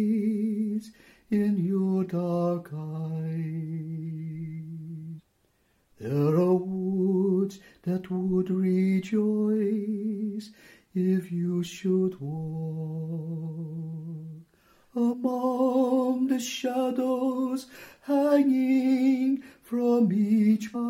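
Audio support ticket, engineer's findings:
Damaged data in the compressed stream, three brief blips at 5.18–5.20 s, 15.12–15.14 s and 20.74–20.76 s, each about 20 ms. Decoder hits corrupted frames, misreads them, loses sync and resumes at the next valid frame header.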